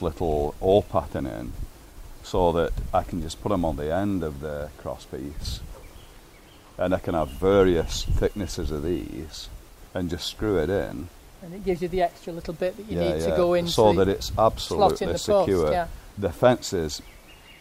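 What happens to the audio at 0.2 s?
At 0.2 s the audio is inside a filter-restarted-on-every-block fault (0.0–1.6 s): state resets each 40 ms block, producing a 25 Hz buzz that tracks the signal level.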